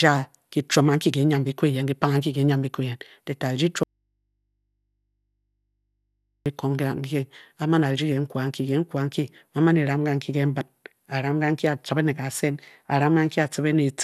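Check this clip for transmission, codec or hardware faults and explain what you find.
One fault is present: an audio dropout to a faint residue from 3.83 to 6.46 s. The speech cuts off abruptly for 2.6 s, leaving only mains hum roughly 55 dB down, likely because the signal was lost while the input stayed live. On a waveform this shows as a near-flat band, and on a spectrogram as thin low hum lines with hard vertical edges.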